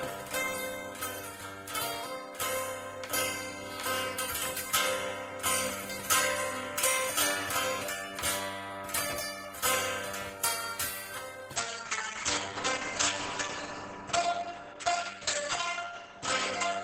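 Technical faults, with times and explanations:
11.56 s to the end, call bitrate drop: from here the audio turns rougher and duller, with the top end pulled down from 20 kHz to about 8 kHz and a watery, coarse texture that sits at its worst for roughly 4.7 s and never recovers before the clip ends. That fits the call's bandwidth estimate collapsing and the encoder falling from around 32 kbps to about 9 kbps, so it codes everything more crudely and cuts off the highs.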